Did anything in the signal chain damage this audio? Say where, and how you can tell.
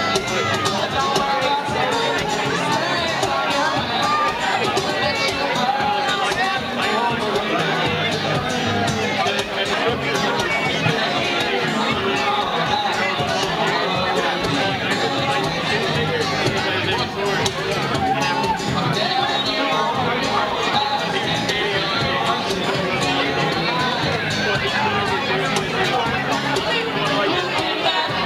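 Yes. Video or display buzz runs through the whole clip, a 60 Hz field-rate buzz with hash above it, sitting roughly 25 dB under the sound. That points to the analogue wiring stage, where a screen or video cable coupled its field scan into the audio path.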